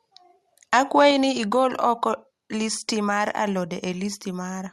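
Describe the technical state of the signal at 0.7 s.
Microphone overload runs from 0.73 to 1.08 s, just before "ni igol oko listi". The peaks are flattened, likely because the input level drove them about 4 dB past the converter's ceiling. A small fraction of samples is sheared off, giving the loudest syllables a harsh, crackling edge.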